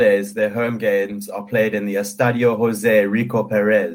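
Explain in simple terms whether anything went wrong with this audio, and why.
Around 0.41 to 0.43 s, the speech turns briefly rough and noisy for about 20 ms, with no gap or dropout. This is a lost packet rebuilt from error correction: one piece of audio went missing, and the next piece carried a simpler backup copy that was played instead.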